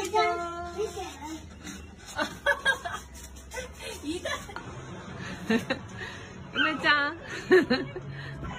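Between 6.23 and 7.23 s the audio picks up channel delay (comb filtering): one side lags by roughly a sample, a few hundredths of a millisecond, and the mono sum cancels around 20 kHz, so it's a slight top-end dulling rather than obvious hollowness.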